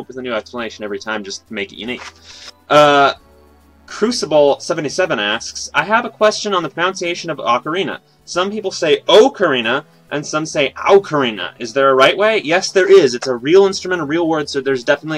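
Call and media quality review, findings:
No faults found in this clip. Nothing was heard that needs a ticket.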